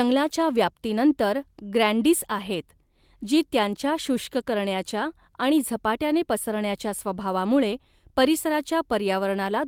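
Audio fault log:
No faults can be heard in this speech recording. Nothing in it calls for an entry in the log.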